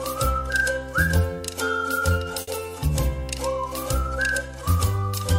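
At 2.41 s a burst of packet loss interrupts the audio until 2.49 s. The receiver conceals the gap by extending the preceding sound for about 60 ms while fading it down, then playback resumes later, with roughly 60 ms of material simply absent.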